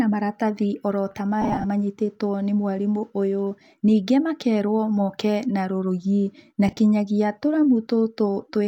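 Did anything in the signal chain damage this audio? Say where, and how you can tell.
Yes, on the Bluetooth link: lost LE Audio frames at 1.42–1.66 s and 6.68–6.77 s, scattered gaps totalling 135 ms and 45 ms. The LC3 decoder patched each gap by repeating the last spectrum with scrambled signs, so the speech briefly smears into noise.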